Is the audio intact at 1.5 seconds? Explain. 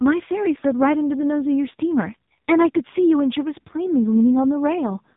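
No, at 1.5 s you're hearing the AMR narrowband mobile codec, which runs through the whole clip. Nothing gets past about 3.8 kHz, and the heavy buzzy, synthetic quality points to a very low bitrate of around 5 kbps, where the vocal-tract model is fed too few pulses.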